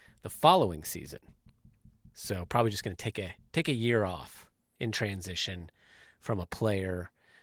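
No technical faults turn up anywhere in this speech clip, so there is nothing to set out in time order.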